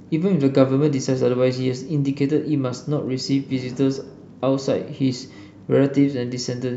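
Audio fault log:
No fault can be heard anywhere in this speech recording. There is nothing to enter in the log.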